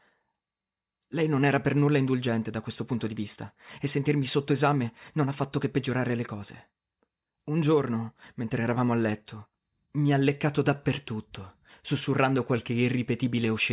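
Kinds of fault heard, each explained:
No technical fault can be heard anywhere in the recording. There is nothing to list under any kind.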